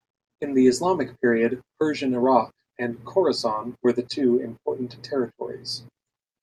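Speech, with no technical faults audible anywhere.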